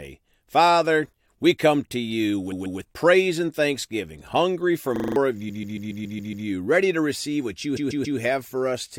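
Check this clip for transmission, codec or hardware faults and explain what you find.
Two kinds of fault turn up: three bursts of repeated frames and one brief system hang loop.

Repeated frames, 2.51 to 2.79 s, 5.48 to 6.46 s and 7.76 to 8.18 s: a run of compressed data was delivered more than once. The decoder replays the same 139.3 ms block, which fits a run of six frames, two, seven and three extra times. Each repeat gives a stutter, and the speech is stretched by 278.6 ms, 975.2 ms and 418.0 ms.

System hang loop, 4.96 to 5.16 s: the computer or driver stalled while the audio hardware kept cycling through the same short buffer. A 40 ms slice plays five times over, a buzz at the 25 Hz loop rate. The speech under it, about a fifth of a second, never comes out.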